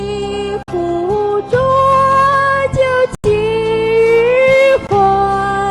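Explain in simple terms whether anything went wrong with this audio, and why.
Bluetooth stall at 0.63–0.68 s, 3.15–3.24 s and 4.87–4.89 s: the sound drops to brief silence, likely because interference delayed wireless data until the headphones' buffer ran empty.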